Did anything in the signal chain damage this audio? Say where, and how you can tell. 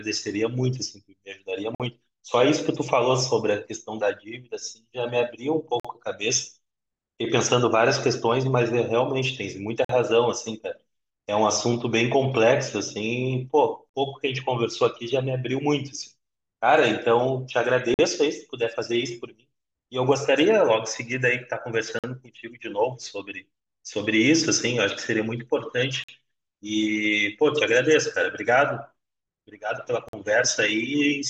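Yes. A gap between chunks at the playback or chunk-assembly stage leaves 48 ms hard-edged silences at 1.75, 5.80, 9.85, 13.89, 17.94, 21.99, 26.04 and 30.09 s, one per 4 s chunk. Unlike dropouts, the speech resumes exactly where it stopped, so nothing is lost.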